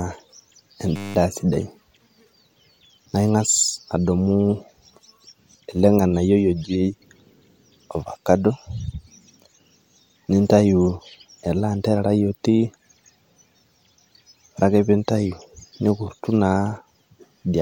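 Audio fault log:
0.96–1.15 s, system hang loop: a steady buzz at 100 Hz, as a single 10 ms slice of speech repeats exactly 19 times while the system froze and the sound hardware kept cycling the same buffer. Essentially no audio is skipped afterward.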